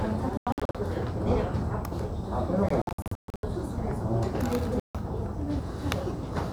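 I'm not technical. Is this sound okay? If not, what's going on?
No. The sound keeps cutting out in short bursts of silence, which points to a likely Bluetooth dropout. It happens from 0.37 to 0.75 seconds, from 2.69 to 3.43 seconds (the worst stretch, with gaps of up to about 130 ms), and once more from 4.80 to 4.95 seconds. Unlike a stall, the sound doesn't pause and pick up where it stopped. It comes back further along, as if it kept playing while you couldn't hear it.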